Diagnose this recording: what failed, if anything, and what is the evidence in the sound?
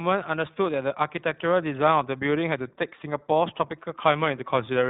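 Codec stage, iLBC codec: speech throughout stops at 4 kHz with a rough, synthetic edge, unlike clean G.711 band-limiting. This fits 20 ms iLBC frames.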